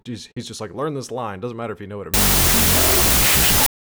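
From 2.14 s to the end, a wrong sample width fault: the speech data, which fits 32-bit float samples, are read as 16-bit integers, so each value splits into two mismatched halves. The result is loud noise with the speech buried inside, playing at half speed and an octave lower.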